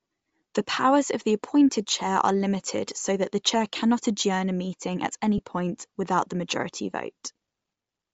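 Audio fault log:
throughout: Bluetooth LC3 compression, likely the cause of the grainy sound on this speech. High frequencies come across as a breathy hiss rather than clean detail. That's typical of a transform codec short on bits: it zeroes much of the upper spectrum and fills the gap with shaped noise. The damage is plainly audible, and the character fits an LC3 stream around 32 kbps with 10 ms frames, where there isn't enough data to code the top end properly.
5.38 s: lost LE Audio frames. There's a tiny rough blip, a brief noisy smear in place of clean speech. It sounds like a single 10 ms frame went missing and the decoder covered the gap by reusing the previous frame's spectrum with randomised signs. That keeps the level roughly right but scrambles the waveform, so for that instant the speech turns into grainy noise before normal decoding resumes.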